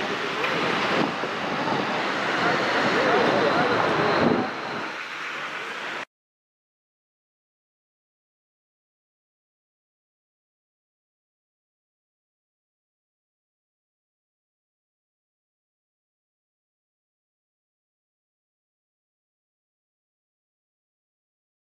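A clock-matching stage likely changed its playback rate in one step, a drift correction step from 5.63 to 6.61 s. The audio runs about 6% fast, raising pitch by roughly a semitone (102 cents) for nearly a second, then snaps back abruptly to normal.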